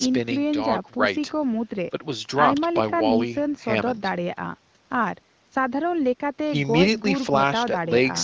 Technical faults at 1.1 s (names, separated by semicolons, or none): none